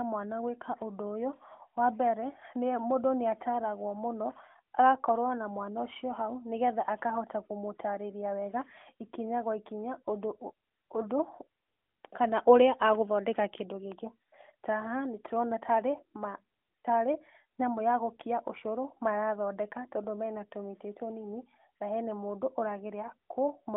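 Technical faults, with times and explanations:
No technical faults, so there are no times or explanations to give.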